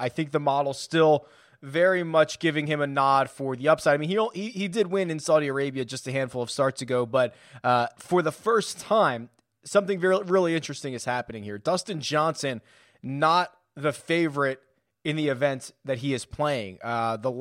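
Nothing in the recording stood out as a technical problem on listening.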